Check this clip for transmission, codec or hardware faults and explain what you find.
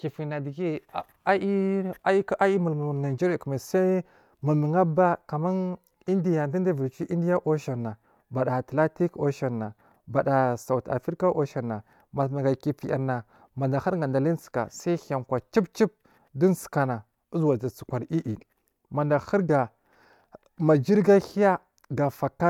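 No transmission, codec or hardware faults can be heard here.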